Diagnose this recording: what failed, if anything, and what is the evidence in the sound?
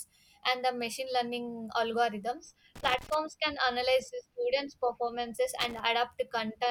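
Loose connector crackle in the analogue wiring: irregular crackle bursts at 2.76–3.15 s and 5.60–5.80 s, where a worn contact intermittently breaks, chopping the speech signal.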